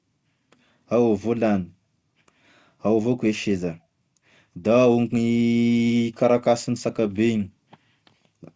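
Clock drift between sender and receiver runs through the whole recording. The sender's clock runs roughly 2 percent slower than the receiver's, so the jitter buffer keeps draining. The speech carries at most slight hiccups and an unsteady tempo, and on a waveform its syllable spacing stretches unevenly rather than uniformly.

From 0.40 s to 8.55 s, repeated timing corrections fill the gap. The receiver repeatedly repeats short slices, slowing playback to about 98 percent and adding around 150 ms overall. A spectrogram shows tiny duplicated frames, with the usual G.722 band ending at 8 kHz.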